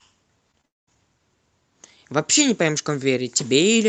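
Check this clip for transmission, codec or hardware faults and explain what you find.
There are two kinds of fault, both packet-level problems on the call link.

Short concealed packet loss occurs twice, at 0.51 to 0.55 s and again at 0.61 to 0.65 s. Each time, about 20 ms of audio arrived too late for the decoder. The receiver covered the gap by extending the preceding sound, keeping its pitch where it was voiced and using shaped noise where it was not. It then faded back into the real signal. Each gap is heard as a brief smear or wobble in the speech.

A long network dropout follows straight after the second gap, running from 0.65 to 0.89 s. This is likely a stretch of the connection in which no packets got through. The receiver carries the last sound forward as a fading buzz or hiss, and then only near-silence is left. When the speech resumes, roughly a fifth of a second of it is simply absent. 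The call codec's roughly 8 kHz upper limit applies throughout.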